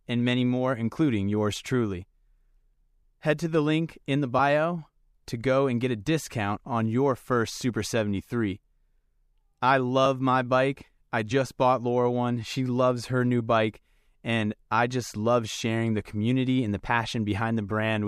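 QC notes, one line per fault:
11.3 s and 13.39 s, compressed frames skipped: at each point the speech lurches forward with a short smeared blip, not a sharp click. About one compressed frame of audio, roughly 30 ms, was never played, which fits a 26.1 ms frame. The overlap between neighbouring frames blurs the join.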